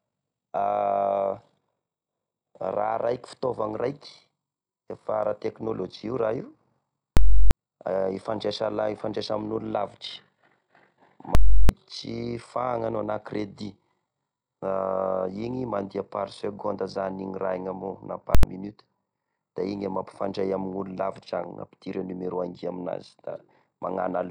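Loud pops bracket silent gaps at 7.17–7.51 s and 11.35–11.69 s, with a shorter burst at 18.35–18.43 s. This is invalid numbers at full scale: a calculation went infinite or invalid, pinning output at one extreme value for blocks of about 341 ms and 85 ms, which fits 16384- and 4096-sample blocks.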